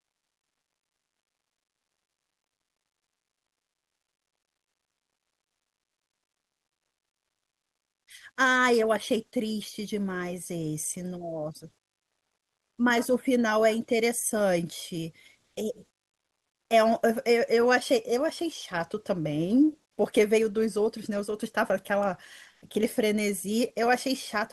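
At 11.98 s, for 0.8 s, the background in a speech pause is replaced by comfort noise: a flat, featureless hiss about 8 dB quieter than the room sound around it. Shorter patches follow at 15.42 s (0.14 s, about 2 dB louder) and 22.54 s (0.08 s, about 4 dB louder). The likely cause is discontinuous transmission, with the sender going silent in pauses and the receiver substituting synthetic noise for the real background.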